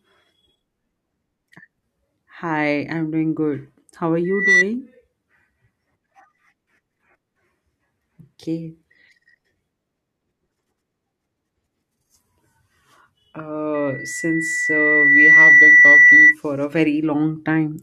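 Loudspeaker feedback squeal hits the speech at 4.24–4.65 s and again at 13.74–16.35 s. A mic-to-speaker loop exceeds unity gain at 2 kHz, so a pure tone swells over roughly a third of a second, then over about a second and a half, ending well above the speech level. A spectrogram shows a bright horizontal 2 kHz line; the waveform shows a growing sinusoidal envelope.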